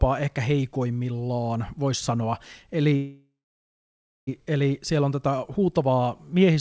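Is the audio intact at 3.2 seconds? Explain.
No. At 3.2 s the sound is in a call audio freeze lasting from 2.96 to 4.29 s, likely from packets held up until the jitter buffer ran empty. The last sound carries on as a fading buzz or hiss, then about 0.96 s of silence. Unlike a dropout, the audio then resumes exactly where it stopped, so nothing is lost and everything after arrives 1.31 s later.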